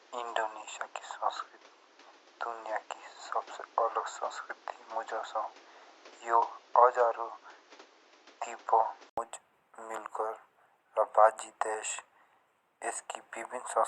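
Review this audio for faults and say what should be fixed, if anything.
From 0.0 to 9.18 s the speech is dull, with nothing above 7.6 kHz and added noise about 30 dB down. An 80 ms gap precedes the clearer sound. This is likely an input switched to a poorer device. Lock the recording input so the system cannot change devices mid-session.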